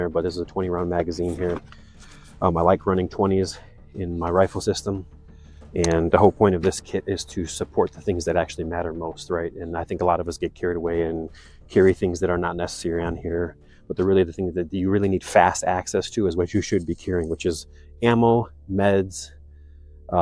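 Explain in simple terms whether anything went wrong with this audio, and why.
Nothing went wrong with this recording from a technical point of view, since the sound comes through steady and unbroken with no glitches, gaps or distortion to point to at any moment.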